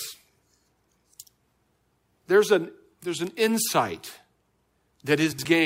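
At 3.27 s, just after "an there's", and again at 5.16 s, a bit error spike produces a sharp broadband tick, where a flipped bit made samples jump by a power of two and snap back. From 5.32 to 5.45 s, frames out of order swap two neighbouring 64 ms blocks of speech, causing a garbled flutter but no lost time.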